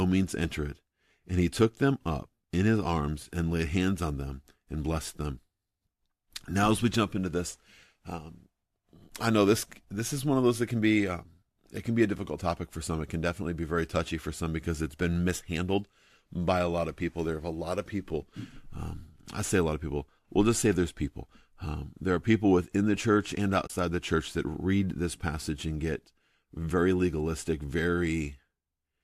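At 23.67 to 23.70 s, between "within the church and" and "the church that read", there is AAC frame loss with muting. About 30 ms of the decoded signal drops to silence, consistent with three lost frames of roughly 10 ms each, as in low-delay AAC. Overlapping windows fade the edges, leaving a soft-edged gap.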